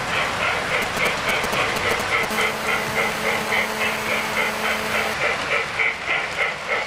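From 0.82 to 2.25 s come GSM signalling bursts. A nearby 2G phone is sending short groups of radio bursts, and the audio circuit rectifies them. The result is a galloping dit-dit-dit of brief 217 Hz buzzes, roughly as loud as the audio itself.

At 2.31 s the GSM phone buzz begins and runs to 5.14 s. The phone is now in a call, transmitting 217 bursts a second without pause. The rectified pulses give a hard, raspy 217 Hz buzz rich in harmonics, about 8 dB below the audio.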